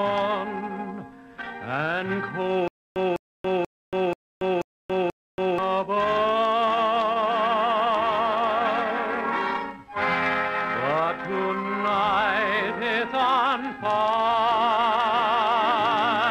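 From 2.68 s to 5.58 s the audio falls into a stutter with silent gaps. A fragment of about 203 ms plays, then stops dead. About 282 ms of digital silence follows. Then the same fragment returns. The cycle repeats six times at an even 484 ms pace. Playback likely stalled, replaying its last buffered piece on each retry before running empty. Whatever should have sounded during those seconds never arrives.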